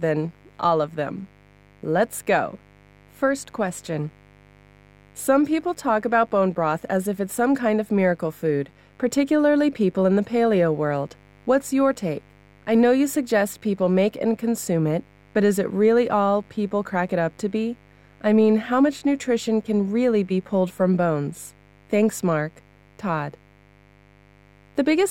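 A speech recording with mains buzz running for its whole length: a steady, raspy tone locked to the 50 Hz supply, sitting roughly 30 dB below the speech. The rasp comes from sharp current spikes drawn twice per cycle, 100 times a second, by something like a dimmer or rectifier, coupling in through poor shielding or grounding. Because the spikes are so abrupt, they produce a dense series of 50 Hz harmonics that climbs well into the kilohertz range rather than a pure low hum.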